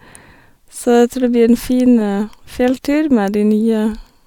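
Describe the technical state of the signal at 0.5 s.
At 0.5 s the speech signal is intact, with no fault present at that moment.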